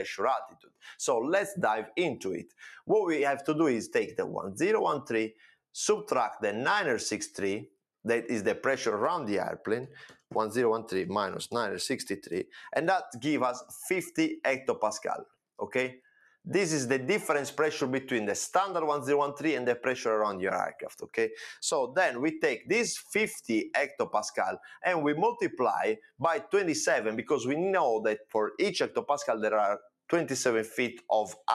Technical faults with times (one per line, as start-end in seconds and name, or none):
0.00-31.54 noise suppressor applied to music or sounds
0.48-0.84 sound cut by the noise suppressor
2.45-2.62 sound cut by the noise suppressor
5.31-5.59 sound cut by the noise suppressor
15.98-16.46 sound cut by the noise suppressor
21.02-21.17 sound cut by the noise suppressor
24.61-24.84 sound cut by the noise suppressor
25.96-26.20 sound cut by the noise suppressor
28.18-28.35 sound cut by the noise suppressor